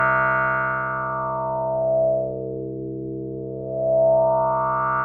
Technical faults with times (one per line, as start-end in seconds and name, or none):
0.00-5.04 noise suppressor applied to music or sounds
2.27-3.73 sound cut by the noise suppressor